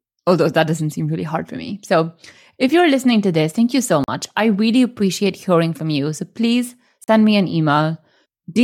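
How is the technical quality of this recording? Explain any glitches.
The recording has two brief dropouts. Each is a block of digital silence lasting 40 ms. The first runs from 4.04 to 4.08 s, between "this thank you so" and "I really appreciate hearing". The second runs from 7.04 to 7.08 s, just before "me an". Samples were replaced by zeros, probably because the output buffer wasn't filled in time. The abrupt cut and return make each one sound like a short hole in the speech.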